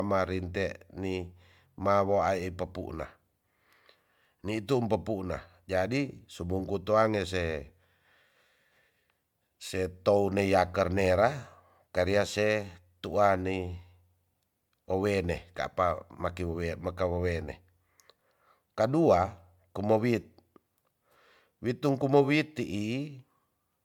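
Throughout, the speech sounds swirly, smeared and hollow, with blurred attacks. This is generation loss, likely from around five successive MP3 encodes near 135 kbit/s.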